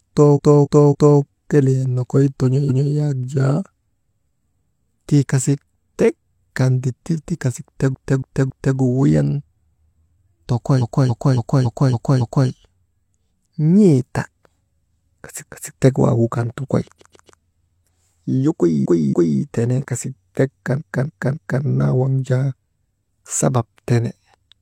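Repeated frames stutter the speech at 0.33–1.16 s, 2.65–2.88 s, 7.90–8.73 s, 10.78–12.45 s, 15.42–15.70 s, 16.95–17.37 s, 18.81–19.37 s and 20.76–21.60 s. Each time, the decoder replays the same stretch of about 280 ms (230 ms and 140 ms at 2.65 s and 16.95 s) from one to six times. Unlike a dropout or a glitch, nothing is lost: identical chunks loop and the clip runs longer.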